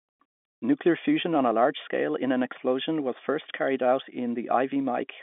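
No faults present; the speech sits on an ordinary G.711 mu-law telephone channel at 64 kbps, with the line band spanning roughly 200 Hz to 3.5 kHz and nothing above 3.8 kHz.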